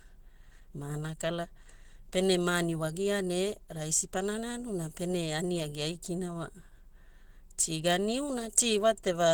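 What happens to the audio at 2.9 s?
At 2.9 s you're hearing Opus compression, which runs through the whole clip rather than starting there. It's likely a low-rate hybrid encode, around 16 kbps, splitting the speech between a speech coder below and band-filling above, so it comes across hoarse, rough and grainy.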